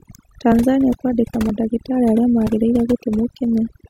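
Across the whole speech clip, overdone noise removal is audible. The reduction has been set too strong, so bands close to the estimated noise floor are pulled almost to nothing along with quiet parts of the voice, leaving near-silent gaps with twinkling specks.

At 0.52, 1.49, 2.47 and 3.44 s the sound skips forward, each time losing roughly 30 ms with the two sides butted together. The steady spacing points to audio missing between chunks, likely from processing in 1-second blocks that drop a slice at each handover.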